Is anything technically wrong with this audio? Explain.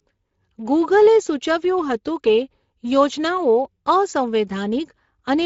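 Yes. From start to finish the speech sounds grainy and hoarse. This is Speex codec damage, and it is plainly audible. Speex rebuilds speech from a vocal-tract model driven by a coded excitation signal. At this setting the sound points to a stream of roughly 16.8 kbps, which leaves too few bits to represent the excitation accurately, so noise and hoarseness are baked into every syllable.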